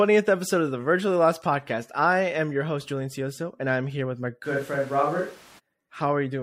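After "I'm here with my", from 4.46 to 5.58 s the speech abruptly turns roomy and hollow, likely a switch to a distant microphone. The waveform drops about 5 dB, while the spectrogram shows thinner lows, smeared reverberant tails and noise about 25 dB below speech, with sharp edges.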